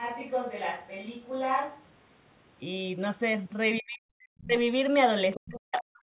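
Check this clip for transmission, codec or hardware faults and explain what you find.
Two faults turn up, both from the call's echo control: the talker's speech being suppressed during double talk, and the far side's voice leaking through.

Speech suppressed in double talk occurs from 3.8 to 4.2 s, from 4.38 to 4.55 s, and from 5.37 s to the end. The talker's level falls by around 40 dB in the first and last stretches and about 35 dB in the middle one, so the sound dips almost to silence in short pieces. The likely cause is an echo canceller that, with both sides talking at once, could not tell the near talker from loudspeaker echo and attenuated everything. Unlike a network dropout, the gaps carry no clicks or repeated fragments. The level is pulled down rather than the audio going missing.

The other side's voice leaking through is a brief scrap from 5.34 to 5.40 s, sitting about 15 dB below the talker's speech. 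The far-end voice came out of the loudspeaker and back into the microphone, and it was likely not fully cancelled, so a faint second voice slips past. It appears right as the last suppression begins, which separates it from room reverberation. It is a different voice layered on top, not a tail of the talker's own sound. Like everything on this G.711 path, it is band-limited at 4 kHz.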